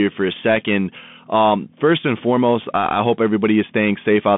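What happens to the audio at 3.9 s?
At 3.9 s the speech is still coming through a Bluetooth CVSD headset codec, which runs the whole clip. A one-bit adaptive-step coder, consistent with a 64 kbps link, keeps only about 150 Hz to 3.5 kHz, leaving audibly scratchy sibilants and granular hiss. A spectrogram shows a hard ceiling near 3.5 kHz; the waveform carries a grainy noise floor.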